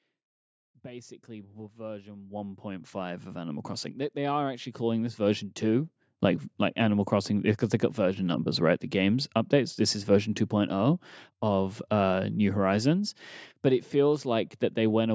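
From 0.82 s to 5.91 s, automatic gain rising is audible. The gain control judged the input too quiet and lifted its level slowly. The rise totals about 19 dB over roughly five seconds. Speech and background noise swell together, so the room grows louder along with the talker. The climb ends just before "like like". The call microphone processing also leaves nothing above 8 kHz.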